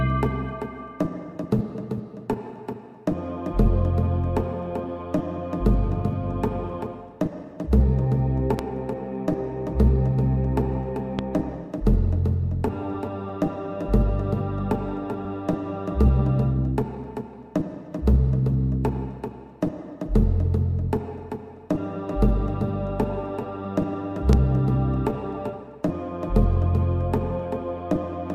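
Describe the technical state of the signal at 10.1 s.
At 10.1 s the signal is intact, with no dropout, distortion, glitch or other fault audible at that moment.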